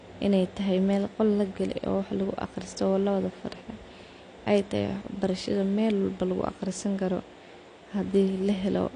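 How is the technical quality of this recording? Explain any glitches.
The speech carries plainly audible codec damage from start to finish, most likely AAC compression. Nothing reaches above 9.8 kHz, so the top is dull, and sustained vowels and sibilants have a warbling, fizzy texture. The encoder codes each frame as frequency lines and, short on bits, drops or roughly quantises bands it judges less audible, which fits a low bitrate around 32 kbps. A simple low-pass filter would sound dull but stay smooth, without this swirling, smeared grain.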